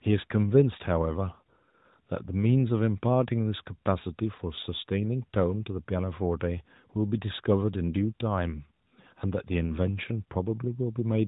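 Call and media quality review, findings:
No faults found in this speech recording.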